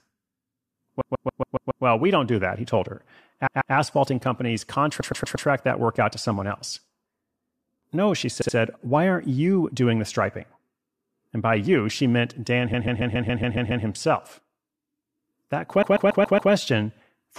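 Repeated frames stutter the speech at 1.00–1.84 s, 3.46–3.74 s, 4.99–5.46 s, 8.41–8.55 s, 12.73–13.84 s and 15.82–16.51 s. Each time, a block of 70 to 139 ms replays two to eight extra times. Unlike dropouts, nothing is lost; the audio gets longer.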